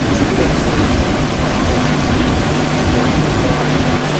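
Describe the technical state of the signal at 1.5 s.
At 1.5 s the speech carries an echo leak across the whole clip: a copy about 340 ms late, at roughly equal level, likely from an echo canceller that missed loudspeaker pickup. On a spectrogram each syllable's pattern repeats, shifted right; the waveform shows doubled envelopes.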